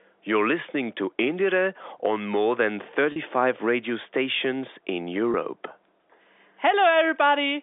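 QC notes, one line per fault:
3.12 to 3.16 s and 5.32 to 5.34 s, packet loss with pitch repetition. About 40 ms of sound goes missing at the first point and 20 ms at the second. That fits two 20 ms packets and then one. The receiver fills each gap by repeating the last pitch period. The result is a brief held, buzzy tone. Both gaps are short, so nothing fades to silence. The repeats sit within the narrow telephone band, 300 Hz to 3.6 kHz.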